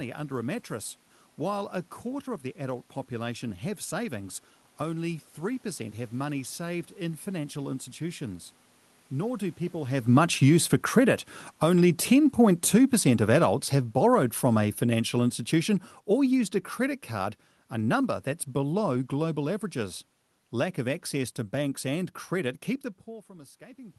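A speech clip where the automatic gain is falling. From about 9.17 s, just before "keep the", the level starts sinking and keeps going down until about 22.59 s, ending roughly 17 dB lower. The room noise sinks right along with the voice, which tells you it's the gain control backing off after deciding the input was too loud or too noisy. It isn't the talker drifting, though they do shift position around 10 s and again near 23 s.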